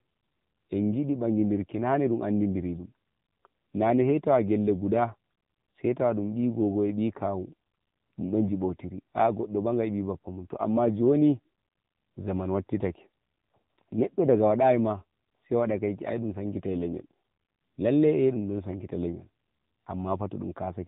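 The speech carries AMR narrowband mobile codec damage for its whole length. Nothing above 3.8 kHz survives, so the voice sounds thin and boxed in, like a phone call. The coding damage is plainly audible. The codec rebuilds each 20 ms frame from a vocal-tract model fed by sparse pulses, and this gives a buzzy, synthetic edge. That degree of roughness points to one of the lower AMR-NB modes, around 7.4 kbps.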